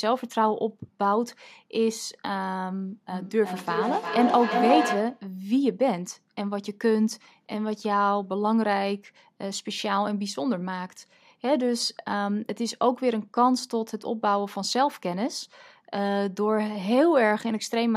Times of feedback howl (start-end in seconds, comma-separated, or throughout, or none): 3.10-5.31